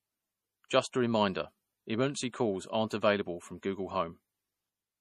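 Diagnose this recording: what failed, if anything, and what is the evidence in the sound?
MP3 compression runs through the whole clip. The fault sits at the codec stage, likely a low-rate lossy encode of the speech. Nothing is present above 15 kHz, a hard treble ceiling where the encoder stopped spending bits, and the coding damage is plainly audible throughout. A perceptual encoder short of bits cuts the top band and drops weaker spectral detail frame by frame, which fits a bitrate of around 40 kbps.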